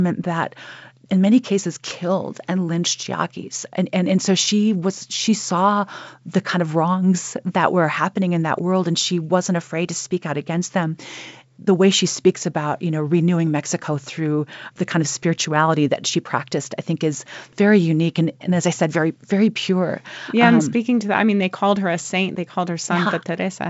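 No technical faults are audible.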